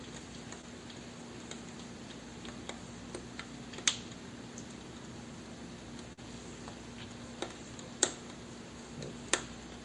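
Two short concealed packet losses, at 0.61 to 0.65 s and 6.13 to 6.19 s. About 20 ms, then 40 ms, arrived too late, so the receiver extended the preceding sound and blended back in. Each is a quick smear or wobble, the second about twice as long.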